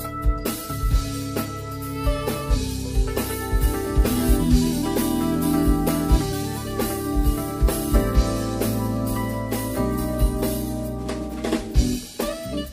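No technical faults can be heard anywhere in this clip.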